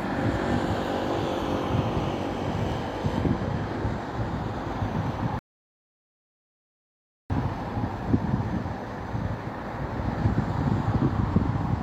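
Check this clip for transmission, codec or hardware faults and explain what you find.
One transmission fault: a rebuffering stall from 5.39 to 7.30 s. The player's buffer emptied, so playback went silent for about 1.9 s, then resumed exactly where it stopped, with nothing missing.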